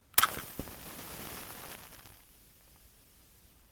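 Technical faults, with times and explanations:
No technical faults can be heard in this recording. Nothing in it calls for a time or an explanation.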